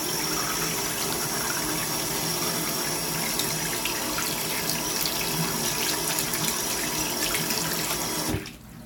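Everyday sound recording, no technical faults heard.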